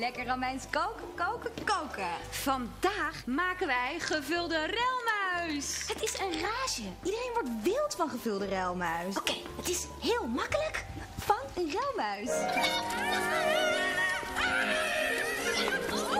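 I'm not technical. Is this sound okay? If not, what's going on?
Yes, the recording is technically sound, with nothing wrong that needs fixing.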